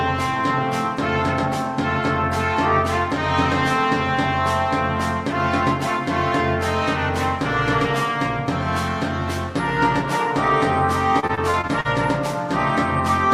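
Repeated packet loss (robotic sound) from 11.19 to 11.87 s: short gaps up to 41 ms are patched by extending the preceding audio, leaving choppy, fragmented sound.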